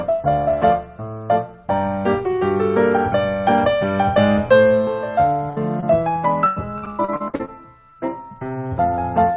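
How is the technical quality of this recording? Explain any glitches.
The recording carries a cluster of packet-loss damage between 5.5 and 8.0 s, heard over a narrowband call path whose energy stops at 4 kHz, which fits G.711 A-law at 64 kbps.

A burst of packet loss runs from 5.50 to 5.58 s, about 60 ms of audio that never arrived in time. The receiver extended the last sound and let it decay, so the gap is heard as a brief held buzz or fading hiss before the sound jumps ahead with that stretch gone. On a spectrogram the harmonics freeze into flat, fading horizontal bands. In the waveform the envelope thins smoothly before the real signal resumes.

Short concealed packet loss occurs at 5.80–5.84 s, and again at 7.90–7.94 and 7.94–7.97 s, which are back to back. Each hole is only 20 ms or so. The decoder bridged it by continuing the preceding pitch or noise, then crossfaded into the real audio. 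The result is a quick smear or wobble, and a brief consonant may drop out. A spectrogram shows a narrow vertical seam where detail blurs. The waveform shows a short, overly regular patch.

Repeated packet loss (robotic sound) fills 6.46 to 7.50 s. Nine separate gaps, the longest about 100 ms, leave roughly 42% of that second patched rather than real. Because each concealment barely ends before the next loss starts, the sound turns choppy, with pieces missing. On a spectrogram this looks like a striped pattern of smeared, repeated frames alternating with genuine detail. The waveform shows an uneven, stuttering envelope across the span.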